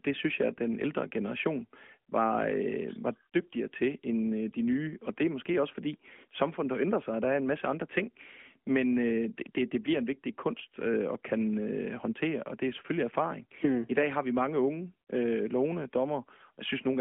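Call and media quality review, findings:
No faults found in the speech. The AMR narrowband mobile codec path is audible as telephone-band sound, roughly 200 Hz to 3.4 kHz with nothing above about 3.6 kHz, and light coding texture consistent with the 12.2 kbps mode.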